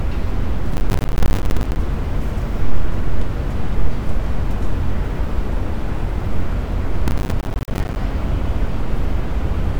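A recording of sounds with two bursts of processor overload crackle, from 0.74 to 1.76 s and from 7.08 to 7.96 s. The processor keeps missing its buffer deadlines, leaving dozens of tiny hard-edged silent gaps, each about one buffer of roughly 10 ms long.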